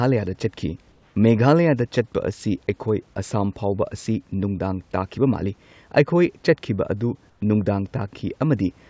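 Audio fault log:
0.92–1.16 s and 7.30–7.42 s (right after "ꯆꯠꯈꯤꯕ ꯑꯗꯨ"), comfort noise in place of the background: the room hiss goes flat and featureless, about 2 dB quieter, likely discontinuous transmission with the receiver filling the pause with synthetic noise.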